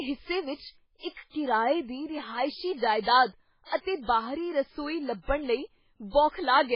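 Likely heavy MP3 compression, running through the whole speech clip, starved the encoder of bits, so it cut everything above 5.3 kHz and dropped weak frequency lines frame by frame, which fits a bitrate near 16 kbps. The result is dull, watery, swirling sound with smeared attacks.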